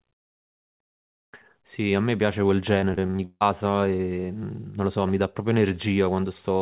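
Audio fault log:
2.8–3.43 s, repeated packet loss (robotic sound): over this stretch the audio keeps dropping out, with the longest gap about 160 ms. Roughly half the span is patched by stretching the last sound, so it turns choppy, all inside the narrowband 4 kHz call sound.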